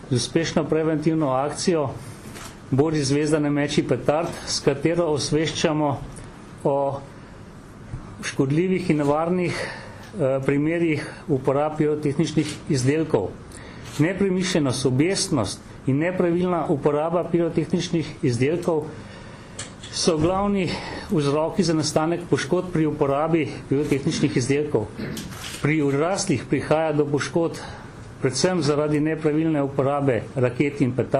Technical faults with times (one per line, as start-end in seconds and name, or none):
none